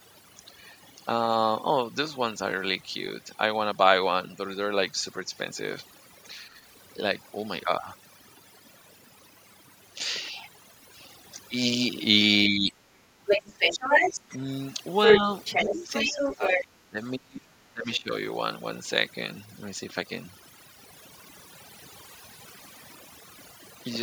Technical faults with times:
0.00-24.02 overdone noise removal
6.36-6.54 speech suppressed in double talk
12.49-13.02 speech suppressed in double talk
13.27-14.38 other side's voice leaking through
14.05-14.40 speech suppressed in double talk
15.05-16.65 other side's voice leaking through
15.64-18.09 speech suppressed in double talk

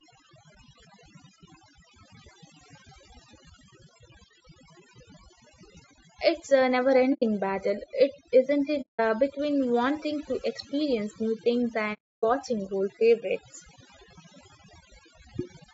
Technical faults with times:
0.00-15.74 overdone noise removal
0.00-15.74 low-delay AAC compression
7.13-7.23 AAC frame loss with muting
8.81-9.00 AAC frame loss with muting
11.93-12.24 AAC frame loss with muting

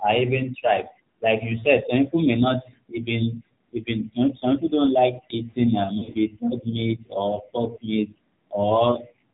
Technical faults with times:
0.00-9.33 AMR narrowband mobile codec
5.98-6.16 lost AMR speech frames

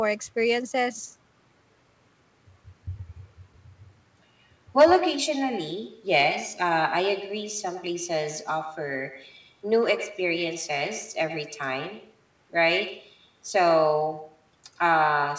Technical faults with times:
0.00-15.38 echo with no canceller
4.81-4.94 hard clipping

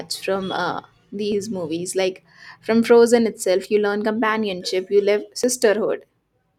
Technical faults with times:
1.32 dropped buffer (overrun)
5.43 dropped buffer (overrun)

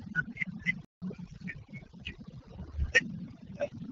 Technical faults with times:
0.00-3.91 overdone noise removal
0.85-1.02 playback stall
1.22-3.91 AMR rate drop

